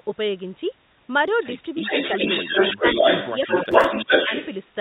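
Speech carried over a narrow telephone-band call path, with nothing above 4 kHz, and from 1.8 s to 4.54 s a second, trailing copy of the talker follows the original about 386 ms behind. This echo leak is roughly as loud as the direct speech or a little louder, so it competes with it instead of sitting underneath. The likely cause is a far-end loudspeaker whose sound reached its microphone and was not fully removed by that side's echo canceller, so the leftover was sent back down the line. During that echo the talker's own level dips briefly in three places: from 2.14 to 2.21 s and from 4.06 to 4.1 s it falls moderately, and from 2.75 to 2.84 s it drops much more deeply. This is speech suppressed in double talk. With both signals present, the canceller likely could not separate the talker from the returning echo and turned the whole signal down for 40 to 100 milliseconds each time. From 3.72 to 3.84 s a short gritty crackle rides on the sound. 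It is processor overload crackle: a handful of audio buffers, each only a few milliseconds long, were not finished on time, and each gap was filled with a repeated scrap of older audio whose hard edges produce the tearing texture.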